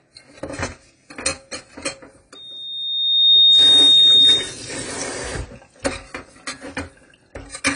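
Throughout the clip, the audio has most likely been through AAC compression, the AAC-LC kind, at a low data rate. Nothing above 10 kHz survives, which fits an encoder running at around 24 kbps that trims its bandwidth to save bits. The damage is plainly audible. The sound is dull and lacks air at the top, and sustained parts take on a smeared, warbling or fizzy texture where the coarse quantisation cannot hold the detail steady.

From 2.35 s to 4.57 s, a loudspeaker feedback squeal breaks in. A microphone is picking up the loudspeaker it drives, and at 3.7 kHz the loop gain rises above one, so that tone feeds on itself. It swells over roughly a second into a piercing single-pitched whistle that sits about 15 dB above the rest of the sound. It stops at 4.57 s.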